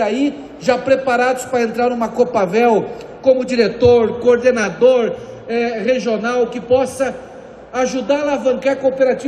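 A tiny skip lands at 0.66 s, and a second, longer one at 4.64 s. Both are overlap between stream segments. The audio arrives in pieces about 2 s long whose time stamps overlap, so the player trims the shared stretch even though that sound was never duplicated. Roughly 6 ms disappears at the first point and about 18 ms at the second, leaving an abrupt jump in the waveform.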